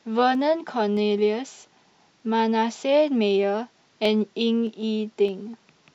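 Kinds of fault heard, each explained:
Clock drift buffer slips: The speech carries a regular click about every 0.62 s, from 0.35 s to 5.90 s. Each click is a jump in the waveform. The likely cause is two devices running on separate clocks that disagree by a few hundred parts per million. The buffer between them creeps toward empty or full. Then a handful of samples is dropped or repeated, and the cycle starts again.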